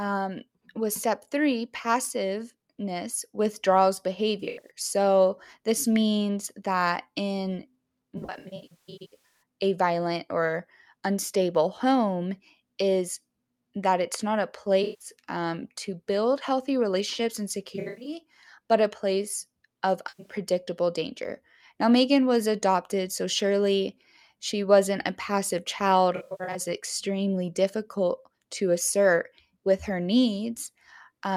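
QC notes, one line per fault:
4.40–4.70 s: AAC frame loss with concealment. About 150 ms of audio is missing across 210 ms. The decoder repeats the last good spectrum, so the speech smears and turns noisy.
8.17–9.42 s: AAC frame loss with concealment. About 810 ms is lost over 1.24 s, in gaps of up to roughly 150 ms. The patched spectrum decays toward silence, then fades back.
14.83–15.08 s: AAC frame loss with concealment. About 170 ms is lost between "that it's not a" and "um to build healthy". The filled-in sound is phasey and blurred.
17.75–18.13 s: AAC frame loss with concealment. About 210 ms drops out over 300 ms, after "build healthy relationships and" and before "but a place of". Concealment leaves a smeared, noisy patch.
20.08–20.33 s: AAC frame loss with concealment. About 150 ms is lost just after "but a place of", in gaps up to about a tenth of a second. Repeated spectra sound washy.
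26.16–26.60 s: AAC frame loss with concealment. About 256 ms is lost across 384 ms. Scrambled-sign filling of the last good spectrum gives a noisy, phasey smear.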